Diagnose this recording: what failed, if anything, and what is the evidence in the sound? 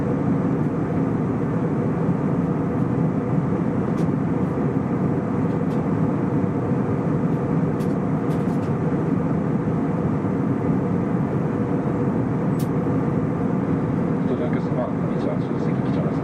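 Nothing in the chain seems to have gone wrong here, and there's no moment in the sound that points to a failure at any stage.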